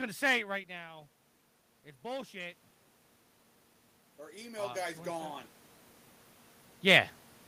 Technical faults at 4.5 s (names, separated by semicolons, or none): automatic gain rising